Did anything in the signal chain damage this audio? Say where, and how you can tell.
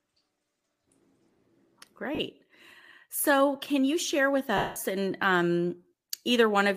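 Yes. Lost LE Audio frames on the Bluetooth link at 2.15–2.19 s and 4.57–4.76 s: the LC3 decoder replays the last spectrum as a noisy smear, fading the longer gap toward silence.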